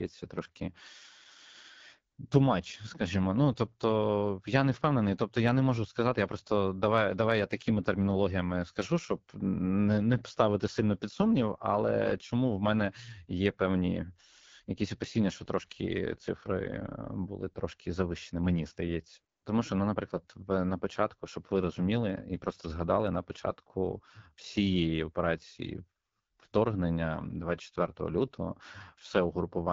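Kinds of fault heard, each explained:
AMR wideband (HD Voice) codec: the speech has a rough, raspy grain throughout, and it's plainly audible. The cause is AMR-WB running at a low rate, which fits about 8.85 kbit/s. That rate models the voice as pulses driving a vocal tract filter up to 6.4 kHz, with too few bits to get the excitation right. The band from 6.4 to 7 kHz is filled with shaped noise instead of real detail.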